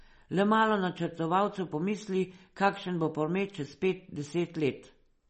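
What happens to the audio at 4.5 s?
At 4.5 s the speech carries the same damage heard throughout: likely MP3 compression, with nothing above 8.3 kHz and watery, swirling artefacts that fit a starved bitrate near 32 kbps.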